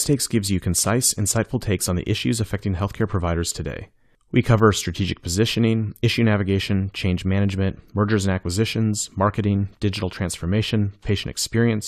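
Nothing in this speech recording points to a technical fault; the signal stays intact and continuous throughout.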